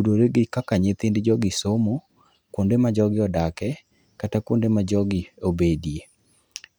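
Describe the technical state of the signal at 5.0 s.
At 5.0 s the speech signal is intact, with no audible technical fault at that moment.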